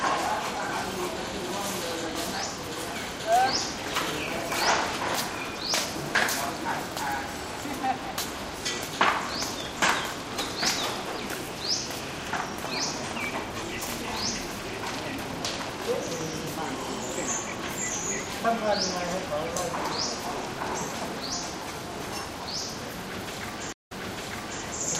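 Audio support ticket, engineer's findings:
Stream reconnect, 23.73–24.63 s. Dropout of about 157 ms, then playback resumes roughly 0.74 s earlier, repeating material just heard. Probable component: network/stream client. Connection lost, player reconnected, fresh decoder started mid-stream on a server-resent burst. Waveform: flat gap, then a short muted or fading-in onset. Spectrogram: blank vertical band, then a repeated pattern.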